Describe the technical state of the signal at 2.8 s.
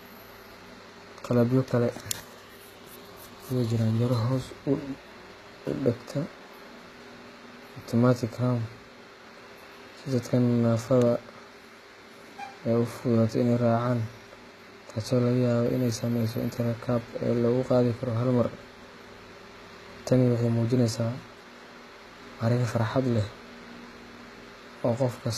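At 2.8 s the signal shows HE-AAC compression throughout, likely at a very low bitrate near 20 kbps: treble above the coded band is rebuilt by copying, so sibilants sound gritty and metallic, with nothing above 14.9 kHz.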